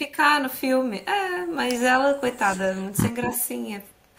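From 2.53 to 2.59 s the speech sags by roughly 5 dB for a brief moment, a little under a tenth of a second. This is likely speech suppressed in double talk: with both ends active, the echo canceller could not separate the near talker from the loudspeaker return and turned everything down. On a waveform the envelope pinches in slightly, and on a spectrogram the harmonics fade for that short span.

From 2.73 to 2.84 s a very faint delayed copy of the voice trails the speech by 243 ms, far below the main signal. It is likely an echo leak, where the far end's canceller let part of its loudspeaker pickup back into the call. On a spectrogram it appears as a ghostly repeat of the earlier harmonic pattern, shifted right by a quarter of a second. On a waveform it is almost invisible.

A stronger scrap of the same echo leak arrives from 3.22 to 3.34 s, again 243 ms behind the original but only about 10 dB down, so it is a much stronger repeat than the first. 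That steady 243 ms offset likely points to the same acoustic loop. A spectrogram shows a clear duplicated harmonic stack laid over the live speech. Inside this stretch, from 3.26 to 3.32 s, the speech also dips by roughly 5 dB. This is likely the same suppression during double talk as the canceller reacts, and it shows as another brief narrowing of the waveform envelope.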